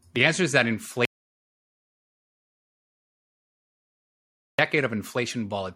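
At 1.05 s, just after "answer is that", the input signal was likely lost while the recorder kept writing silence. This audio dropout to silence cuts the speech off into dead silence with no room tone, and speech resumes mid-flow at 4.59 s, about 3.5 s later.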